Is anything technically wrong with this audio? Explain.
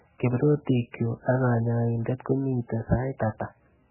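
Yes. Throughout the speech, the band stops abruptly at 3 kHz, leaving the sound dull and boxed-in, with a heavy watery, swirling texture and smeared consonant onsets. This is likely MP3 compression at a very low bitrate, roughly 8 kbps. Starved of bits, the encoder cuts everything above a fixed frequency and discards weak spectral lines, which then flicker in and out from frame to frame, producing the warbling and the blurred attacks.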